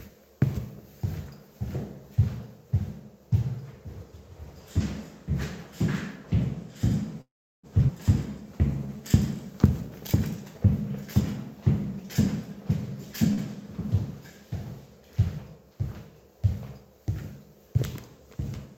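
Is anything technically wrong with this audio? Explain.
Yes, there are three network-related faults.

At 7.21 to 7.66 s there is a call audio freeze: the sound trails off into silence for most of that half-second, then resumes where it stopped. The likely cause is delayed packets draining the jitter buffer.

At 7.87 to 7.91 s a skip ahead occurs. The audio jumps forward abruptly, losing roughly a fifth of a second, as a stretch of audio is dropped while later audio is already waiting.

At 13.33 to 13.41 s there is a short stall from a late packet. The sound is held about 44 ms too long while a late packet is awaited.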